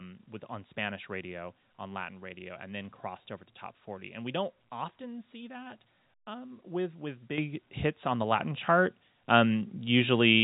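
At 7.38 s the microphone volume gets stepped up by about 8 dB, and then again at 8.4 s by about 4 dB more. That's the call software deciding the mic was too quiet and bumping the device's input level in one go, so the speech and the background jump louder together rather than ramping. Throughout, the G.711 A-law coding at 64 kbps keeps everything within the narrow telephone band, with nothing above 4 kHz.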